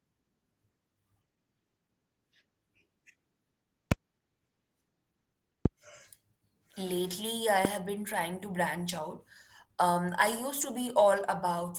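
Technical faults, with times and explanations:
throughout, Opus voice compression: the speech sounds plainly hoarse and slightly robotic, consistent with roughly 16 kbps hybrid coding that quantises the excitation coarsely and codes the high band sparsely.
3.92–3.94, 5.66–5.68 and 7.65–7.67 s, loud pop: sharp single clicks, roughly 20 dB above the speech, the last just before "been trying to branch", likely from a brief voltage spike.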